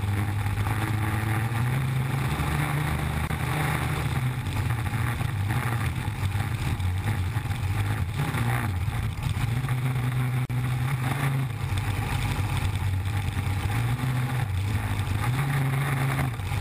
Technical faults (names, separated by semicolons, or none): gap at a join of encoded pieces